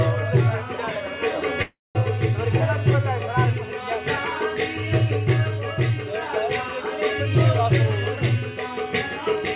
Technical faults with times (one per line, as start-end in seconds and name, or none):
1.62-1.96 long network dropout
2.09-3.47 jitter buffer speed-up